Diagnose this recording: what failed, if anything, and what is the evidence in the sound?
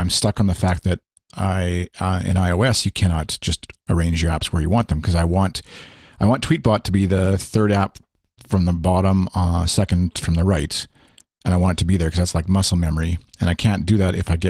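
Nothing stood out on listening to this speech recording, and there is no failure at any stage to diagnose.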